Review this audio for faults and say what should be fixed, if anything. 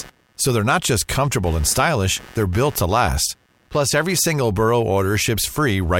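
A pulsing noise at around 150 Hz, roughly 25 dB below the speech, runs from 0.00 to 4.20 s: computer activity noise, from processor or peripheral load disturbing the shared audio ground. Fix it by isolating the audio interface's ground, for example with a ground-loop isolator or separately powered interface.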